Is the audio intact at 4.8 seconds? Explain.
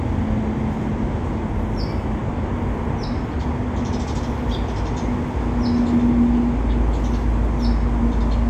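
Yes, at 4.8 seconds the sound plays through cleanly, with no dropout, click or distortion.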